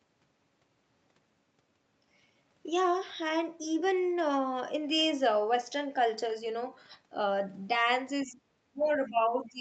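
Speech suppressed in double talk begins at 8.26 s and runs to the end of the clip. The talker's level sinks unevenly, at its deepest by something like 25 dB, so the sound thins and partly drops away. The likely cause is the echo canceller: with both sides talking at once, it could not tell its own talker from loudspeaker echo and pulled down the whole microphone signal. The band stays capped near 8 kHz from the Opus call path throughout.

The other side's voice leaking through appears briefly from 8.83 to 8.90 s, inside that suppressed stretch. It is a short, faint scrap, roughly 30 dB below the talker. This is likely residual echo: the far side played on the device's loudspeaker reached the microphone, and the canceller failed to remove all of it.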